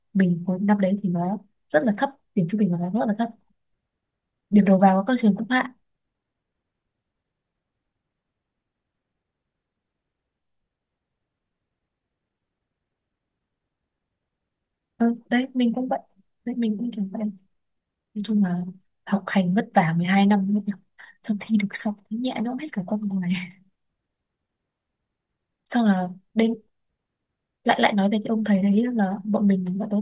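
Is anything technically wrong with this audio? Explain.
No, nothing is technically wrong with this audio.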